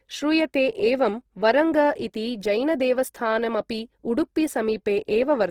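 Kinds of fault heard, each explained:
Opus compression: The speech is plainly rough and grainy throughout, its tone turned noisy. The likely cause is an Opus encode in music mode, fitting about 16 kbps. Starved bands are filled with noise, so the sound still reaches 20.4 kHz.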